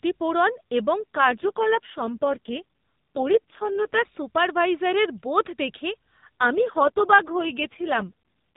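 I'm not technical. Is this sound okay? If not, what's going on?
No, not entirely. This is speech over a mobile phone connection, and twice the line hits an AMR rate drop: from 1.00 to 4.06 s, and again from 6.40 s to the end. The network squeezes the voice into far fewer bits to protect a shaky signal, so the voice turns rough, buzzy and a bit robotic. Nothing cuts out and it keeps its usual phone-call tone.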